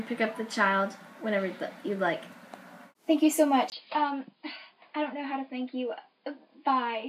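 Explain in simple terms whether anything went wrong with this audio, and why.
At 3.7 s the sound goes abruptly duller, a little quieter, and a faint new background noise appears, after a tiny gap of about 20 ms. This is likely an input switched to a poorer device. A simple filter would only muffle the sound, but here loudness and noise shift too.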